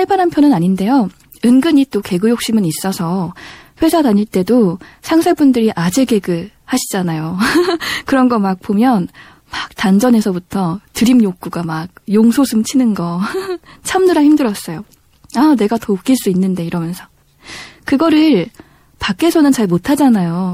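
Throughout, a bit-starved encoder, likely MP3 compression, toggles weak frequency lines between frames, which fits about 64 kbps. The speech sounds plainly watery and swirly, with metallic chirps on s sounds and smeared attacks.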